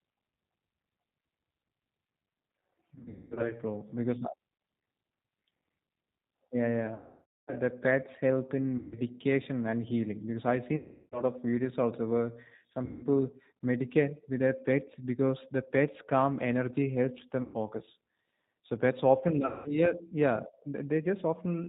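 G.729 codec throughout: an 8 kbit/s coder rebuilding speech from filter, pitch and pulses removes everything above 4 kHz, leaving a plainly rough, synthetic quality. VoIP packet loss concealed by the speech codec at 2.95, 6.94, 8.78, 10.77, 12.85, 17.42 and 19.46 s: the decoder stretches its last pitch and filter into a fading buzzy tone or coloured noise, with the longest gap, 540 ms, at 6.94 s.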